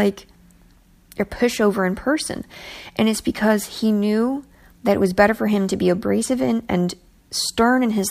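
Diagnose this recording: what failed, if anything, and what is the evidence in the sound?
No fault can be heard.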